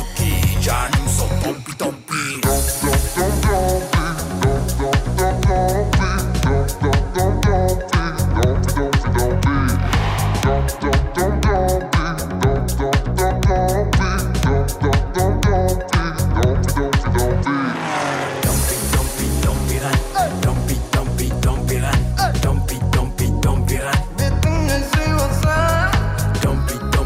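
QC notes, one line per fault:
Nothing stood out on listening.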